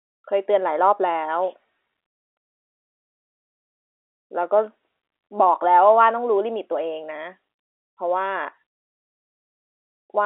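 The speech comes through an ordinary G.711 telephone coding path, its band limited to roughly 300 Hz to 3.5 kHz as a phone line would carry it, and nothing in the signal stands out as a technical fault.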